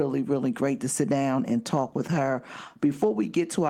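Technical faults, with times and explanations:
1.87 s to the end: call bitrate drop. The speech turns rough and watery. The call's bandwidth estimate fell, so the encoder coded each frame far more coarsely. The sound fits a cut from 32 to 18 kbps, bottoming out for 1.49 s.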